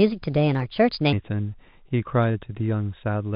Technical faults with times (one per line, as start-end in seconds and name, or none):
0.00-1.13 section at the wrong speed
1.89-2.61 repeated stalls (stutter)